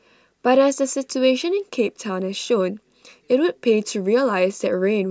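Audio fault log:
No faults detected in this speech clip.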